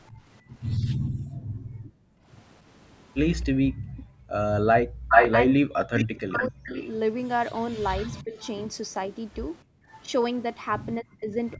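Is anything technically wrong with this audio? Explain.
Yes. Three related call-processing faults can be heard in this speech.

Echo leak: a delayed copy of the speech comes back. At 0.06 to 0.1 s it is a faint scrap, about 40 dB below the voice and trailing by 262 ms. From 3.4 to 10.02 s it is much more obvious, roughly as loud as the speech itself and lagging by 422 ms. The likely cause is that the far end was on a loudspeaker and its echo canceller failed to strip out what its microphone picked up, so that sound was sent back down the line.

Background gated by the echo canceller: the room sound behind the voice dips sharply, by about 40 dB at its deepest, then returns. This happens on and off between 0.11 and 4.33 s, for roughly three seconds in total, and again briefly from 9.64 to 9.9 s, for about 0.3 s. While the loudspeaker was playing, the canceller clamped the microphone down hard and only let it back up once playback stopped.

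Speech suppressed in double talk: the talker's voice dips or cuts out in pieces. Between 4.88 and 8.34 s it drops by up to roughly 40 dB, about a second and a half in all. Over the last 0.6 s, from 11.01 s to the end, it drops by up to about 35 dB. The likely cause is both sides speaking at once, so the canceller could not tell the near talker from the loudspeaker echo and turned both down.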